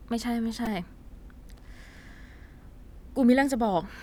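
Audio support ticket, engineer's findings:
Brief buzz in the speech at 0.66 s, one tiny click at 1.97 s. Repeated buffer from the playback device: audio arrived late, so the last ~2.7 ms block, which fits a 128-sample buffer, replayed with hard joins, several times then once, losing roughly 10 ms and a few ms.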